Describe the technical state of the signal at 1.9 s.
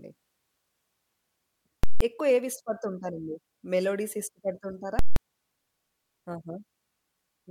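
At 1.9 s the signal is pinned at one extreme value, invalid numbers at full scale: a calculation produced infinite or invalid numbers, which were clamped to the largest value, and this held from 1.84 to 2.01 s, a 171 ms block that fits an 8192-sample buffer. The speech gives way to a very loud pop, silence, then another pop.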